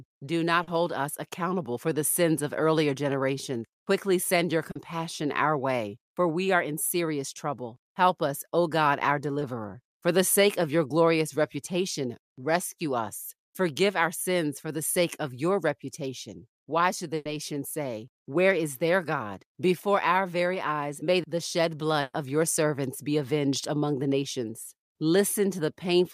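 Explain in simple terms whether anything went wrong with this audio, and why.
Bits of the call dropped out on the way. First, short concealed packet loss at 0.63, 4.71 and 9.39 seconds: 20 to 40 ms went missing, and the receiver papered over each gap by stretching the last sound, so you hear a quick smear or wobble.

Then there are two bursts of packet loss, at 17.15–17.27 and 22.01–22.15 seconds, losing 100 and 120 ms. The receiver held the last sound and let it fade into a short silence, and the speech picks up a bit further along, with that stretch gone.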